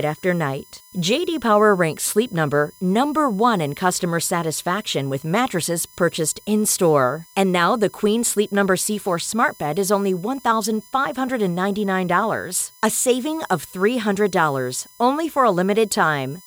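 A speech recording with USB whine running through its whole length. A thin, fixed-pitch tone sits under the speech from start to finish. It is built on 1 kHz, the USB bus's 1 ms frame rate. Its strongest component is high up, at 10 kHz, the tenth multiple. It sits roughly 30 dB below the speech. The bus draws current in bursts at that rate, and the ripple leaks into the audio path through shared power or ground.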